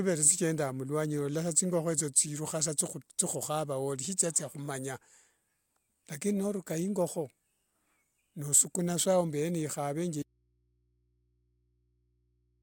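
At 10.23 s the speech cuts out abruptly into an audio dropout to a faint residue that lasts to the end, leaving only mains hum far below the signal, likely from a live but disconnected input. The waveform collapses to a near-flat trace, and the spectrogram shows only thin low-frequency hum lines.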